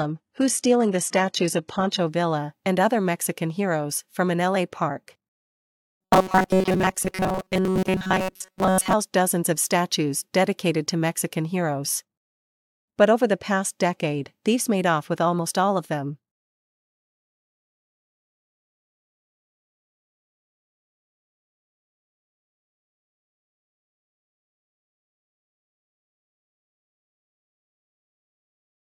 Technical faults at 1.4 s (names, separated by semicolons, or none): adaptive stream starting at a low bitrate